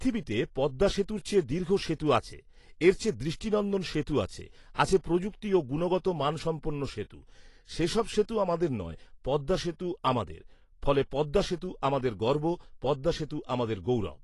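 AAC compression runs throughout: nothing is left above 11.5 kHz, and the speech sounds dull and smeared, with a warbling, fizzy edge on sibilants. A low-bitrate AAC-LC encode, around 32 kbps, is the likely cause, quantising coarsely and cutting the top band.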